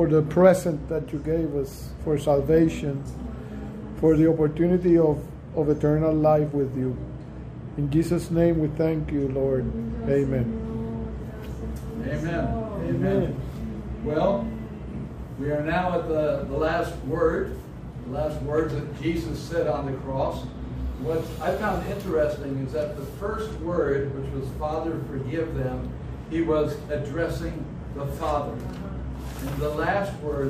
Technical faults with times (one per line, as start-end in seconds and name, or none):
none